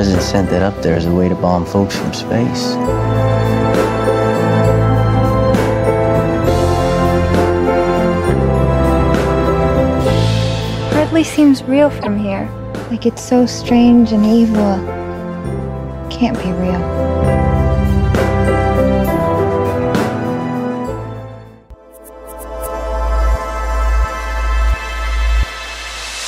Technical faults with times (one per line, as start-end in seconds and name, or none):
12.00-12.07 repeated frames